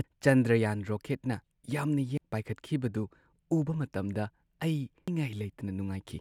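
At 0.04 s, 2.18 s and 5.08 s the speech is interrupted by a short, harsh blip, each one an instant long. These are damaged data in a compressed stream: at each point some bytes in the encoded file are wrong, so the decoder cannot make sense of the frame it is reading, loses its place, and hunts for the next valid frame header before it can resume normal decoding.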